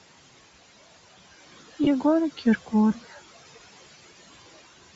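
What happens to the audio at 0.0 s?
From 0.0 s, and for the whole clip, the speech carries noise suppressor artifacts. The room noise sits about 16 dB below the speech, and the suppressor pulls the bands it judges to be steady noise down by about 15 dB, frame by frame. As a result, the background drops away in the gaps between phrases and swells back under the speech.

Also present from 0.0 s is plainly audible codec damage, with a breathy, grainy edge on the speech and a smeared, noise-like top end. This is likely Bluetooth LC3 compression. At a low bitrate, this transform codec discards much of the upper spectrum and fills it back in with shaped noise, which produces the coarse sizzle heard here. The character points to a rate around 32 kbps with 10 ms frames.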